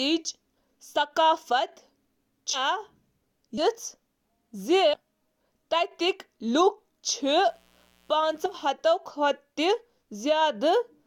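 Compressed frames skipped at 2.53–2.58 s, 3.57–3.62 s and 4.93–4.97 s, then again at 8.45–8.49 s, make this speech recording jump forward abruptly: roughly a fifth of a second of audio vanishes at each of the first three, and a shorter stretch of around 70 ms at the last. The jumps fit whole 20 ms frames missing from the file or rejected by the decoder as damaged. Mains buzz runs from 7.19 to 8.73 s, a steady raspy drone built on 60 Hz harmonics that extend well into the kilohertz range, sitting around 40 dB below the speech. A dimmer, rectifier or unshielded lead injects sharp switching spikes twice per mains cycle, producing the buzz.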